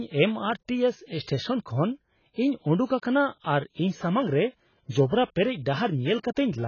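From start to finish the speech sounds dull and smeared, with a watery warble on sustained vowels and a fizzy edge on sibilants. This is likely heavy AAC compression at a low bitrate, around 16 kbps: the encoder drops fine detail, leaving holes in the spectrum, and cuts everything above 6.8 kHz. On a spectrogram the energy stops at a hard ceiling near 6.8 kHz, with patchy gaps and blocky smearing below it.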